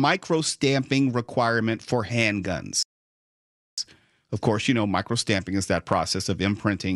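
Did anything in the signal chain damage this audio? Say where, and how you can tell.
Yes, at playback: the speech drops to silence from 2.83 to 3.78 s, a playback stall of about 0.95 s, likely the player starving for data.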